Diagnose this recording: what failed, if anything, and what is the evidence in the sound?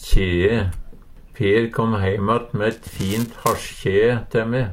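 Buffer tearing runs from 2.71 to 3.69 s, a failure at the driver or buffer stage. Across that span the sound carries a steady robotic buzz at 375 Hz, which fits a 128-sample buffer. The application and the hardware have drifted out of step, so their pointers cross inside every period. A small sliver of each period, roughly a couple of percent, replays audio about 5 ms old, bounded by hard joins that produce the rattle.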